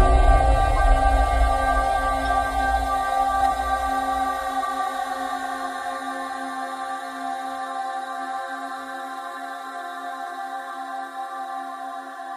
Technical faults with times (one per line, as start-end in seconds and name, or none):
2.25-2.27 corrupt frame decoded
3.40-3.54 compressed frames skipped